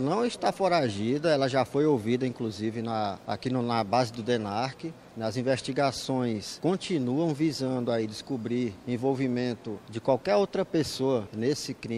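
Nothing goes wrong anywhere in the clip; the sound just runs along steadily without a hitch.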